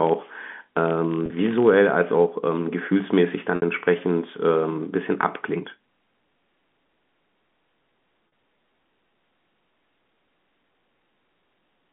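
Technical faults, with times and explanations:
0.00–1.77 s, filter restarted on every block: a buzz near 43.1 Hz runs under the speech, rising and falling with its level. Each block starts its filter from silence, leaving a small transient at every boundary; the rate fits a 1024-sample block. A dropout would give isolated gaps, and mains hum would stay steady regardless of level. This buzz keeps strict time and tracks loudness, then stops cleanly after 1.77 s.
1.26–1.30 s, 3.56–3.62 s and 8.28–8.32 s, packet loss with pitch repetition: three short losses, of 40 ms, 60 ms and 40 ms; the two 40 ms ones sound like a briefly held, buzzy stretch rather than a click or gap, while the 60 ms one fades into silence before the speech returns with a short cross-fade. The receiver filled each hole by repeating the last pitch period and fading it, which fits two, three and two lost 20 ms packets. The held tone, narrowed by the working G.711 telephone band, is the giveaway.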